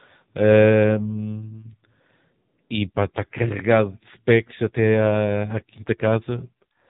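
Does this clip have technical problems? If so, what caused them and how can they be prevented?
Yes. AMR narrowband mobile codec damage throughout: nothing above 3.8 kHz, with heavy buzzy, synthetic speech consistent with a low-bitrate mode around 6.7 kbps. Prevent it by recording or transmitting through a wideband path instead of narrowband mobile telephony.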